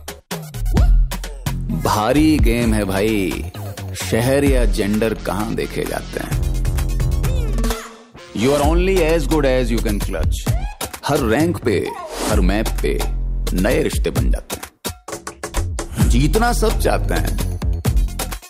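Nothing in the audio points to a technical fault at any point, so there are no times or causes to report.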